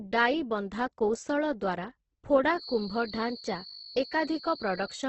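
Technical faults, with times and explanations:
throughout, Opus compression: the speech was likely squeezed through a starved Opus encoder in its music mode at around 12 kbps, so nothing above 8.1 kHz survives and the voice sounds rough and grainy.
2.51 to 5.09 s, feedback whistle: a loudspeaker-to-microphone loop likely hovers at the edge of feedback, sustaining a thin 4.4 kHz whistle that slowly swells and fades roughly 15 dB beneath the speech.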